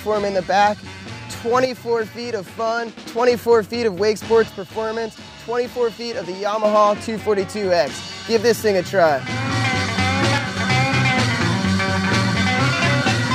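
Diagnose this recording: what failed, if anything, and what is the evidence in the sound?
The level abruptly sinks by about 6 dB and recovers three times: 1.65 to 2.97 s, 4.49 to 6.64 s, and briefly 10.38 to 10.57 s. This is one channel dropping out, likely an intermittent stereo connection in the analogue wiring, leaving the mono sum carrying only the surviving side.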